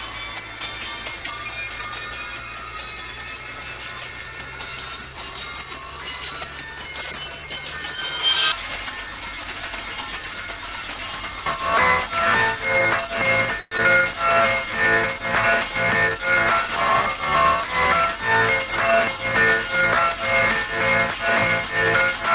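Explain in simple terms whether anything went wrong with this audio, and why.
Long network dropout at 13.6 to 13.8 s: the sound smears into a fading buzz, then returns with a brief piece lost, likely because data stopped arriving.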